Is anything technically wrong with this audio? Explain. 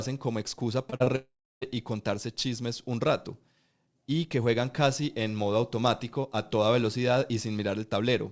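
Yes. Right after "como excusa", the speech breaks up in two distinct ways.

Short concealed packet loss occurs three times in quick succession: at 0.90 s (about 20 ms), 0.96 s (about 40 ms) and 1.04 s (about 20 ms). Audio packets arrived too late for the decoder, which filled each gap by extending the preceding sound and then blending back into the real signal. Each one sounds like a small smear or wobble. On a spectrogram, the preceding sound's spectrum carries on across each gap, and the waveform shows a slight seam where real audio resumes.

The long network dropout runs from 1.16 s to 1.64 s, ending just before "y contarse chismes un". For nearly half a second, no audio arrived. This was likely caused by the network path delivering nothing at all. The receiver first extended the last sound as a fading buzz or hiss, and roughly the final 0.3 s is plain silence before the speech returns with that stretch missing. 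On the waveform, the envelope decays smoothly to a flat line. On the spectrogram, a band of smeared, decaying energy gives way to an empty gap. Across the whole clip, the spectrum has no content above 8 kHz, which fits a wideband call codec such as G.722.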